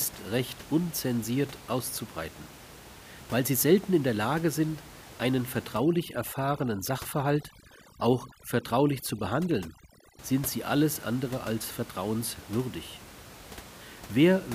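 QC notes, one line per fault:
5.76 to 10.19 s, overdone noise removal: a noise reducer set far too hard cuts individual frequency bands whenever they sit near its noise estimate, so the room noise, about 19 dB below the speech, drops and breaks up into twinkling specks.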